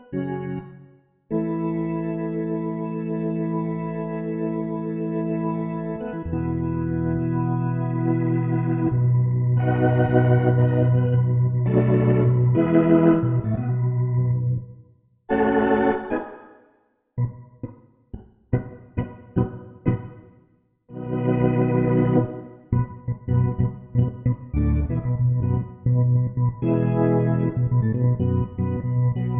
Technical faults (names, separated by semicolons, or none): none